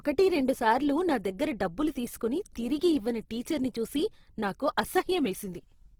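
A low-rate encode, likely Opus compression in its music mode at a rate fitting about 16 kbps, squeezes this speech throughout: band energies are kept but detail is filled in with substitutes, so the speech sounds plainly grainy and rough, though content still reaches 20.2 kHz.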